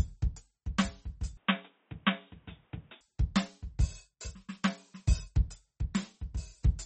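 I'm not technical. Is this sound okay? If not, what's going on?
No. The whole piece of music sounds watery and dull, with the treble cut off above about 8.4 kHz. That is likely MP3 compression squeezing it too hard.

From 1.37 to 3.01 s it turns muffled, boxy and slightly quieter, with some added background noise. The likely cause is the input switched to a poorer device.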